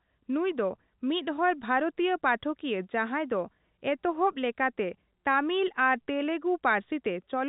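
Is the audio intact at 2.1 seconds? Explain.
Yes, the audio is intact at 2.1 seconds, with the speech carried cleanly through the telephone-band G.711 coding.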